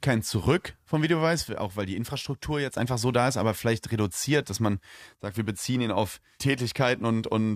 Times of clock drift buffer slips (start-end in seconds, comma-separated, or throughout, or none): none